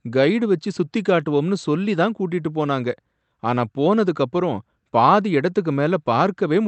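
No technical faults can be heard in this speech clip, which comes through a WebRTC call path that works normally.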